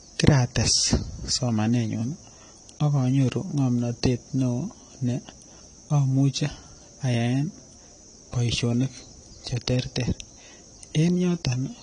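A speech recording carrying AAC compression damage from start to finish: the sound is dull and smeared, with a watery warble on held vowels and fizzy, unstable sibilants, which fits low-bitrate AAC-LC, likely around 32 kbps. The encoder has discarded everything above 10.1 kHz, so a spectrogram shows a hard ceiling at that line across the whole clip, with patchy holes and blotchy noise-filled regions in the upper bands below it.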